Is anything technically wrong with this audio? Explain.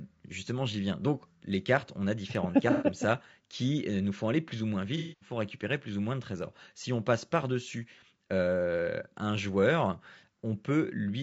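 Yes. The speech carries plainly audible low-delay AAC compression throughout. The roughness and graininess most likely come from AAC-ELD coding at a bitrate around 32 kbps. Its short frames can't resolve the pitch harmonics cleanly, so the encoder spreads quantisation noise between them. On a spectrogram the harmonic stripes look blurred and noise fills the gaps between them, with a thin or patchy top band. The waveform looks normal, so the damage shows mainly in the spectral view.

There are two AAC frame loss with concealment events, where the decoder had no data and rebuilt the missing stretch from the last good spectrum. From 2.72 to 2.86 s about 90 ms is missing and the speech smears into a brief noisy, phasey blur. From 4.97 to 5.32 s the loss is longer, about 240 ms, and the smeared, noisy patch lasts noticeably longer. On a spectrogram each event shows the harmonic detail melting into a flat, stretched smear. 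In the waveform the envelope loses its natural syllable shape across those spans.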